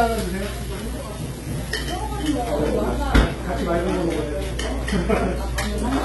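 The whole clip is a collection of sounds with heavy HE-AAC compression damage. Nothing comes through above 11.8 kHz, and the top end sounds gritty and metallic, which points to treble being likely rebuilt from copied lower bands at something near 16 kbps.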